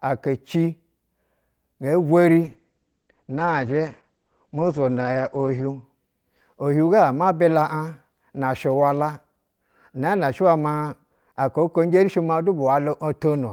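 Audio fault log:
2.45–5.89 s, call bitrate drop: the speech turns rough and watery, its top end cut from 20 kHz to 8 kHz for 3.24 s at worst. This fits the bandwidth estimate falling and the encoder coarsening from 32 to 10 kbps.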